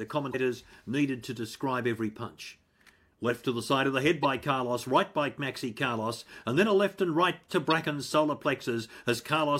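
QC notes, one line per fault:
0.30–0.35 s, 4.23–4.25 s and 7.70–7.72 s: damaged data in a compressed stream. Each is a brief glitch cutting into the speech, the first about 40 ms long, the second about 24 ms and the third about 20 ms. Bad bytes in the encoded stream make the decoder misread or discard those frames, then lose its place and hunt for the next valid frame header, so you get a short burst of garbage where the audio should be.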